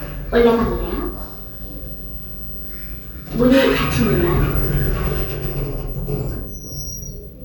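Nothing stood out on listening to this recording of sounds.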